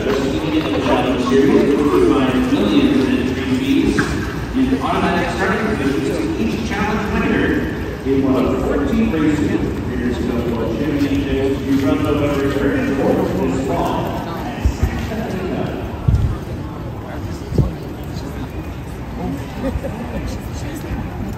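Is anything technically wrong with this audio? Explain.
No, no technical faults heard.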